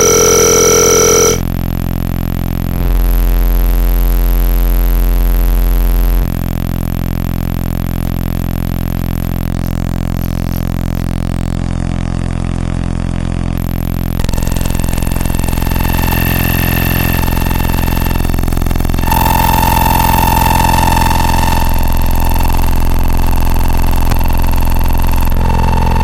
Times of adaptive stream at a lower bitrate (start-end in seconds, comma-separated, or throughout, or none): 11.57-13.57